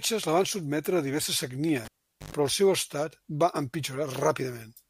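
At 1.85 s, after "van sotmetre a diverses", a pop drops to near silence for 431 ms. Then 100 ms of 50 Hz buzz and a pop at 2.33 s: a cable pulled and plugged in live.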